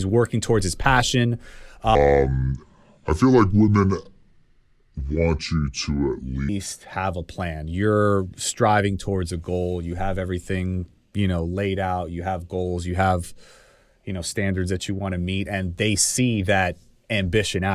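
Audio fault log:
1.95–6.49 s, wrong sample rate: after "working towards his passion", samples are played back slower than recorded, with no conversion, so speech drags at two-thirds speed and drops about 7 semitones, which fits 48 kHz audio played at 32 kHz, until "have a plan".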